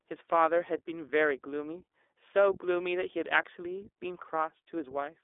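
The speech runs through the iLBC codec for its whole length, coding each short frame independently at a rate that fits 15.2 kbps with 20 ms frames. The band is confined to about 300 Hz to 3.6 kHz, so it sounds narrow, with a plainly audible rough, synthetic texture.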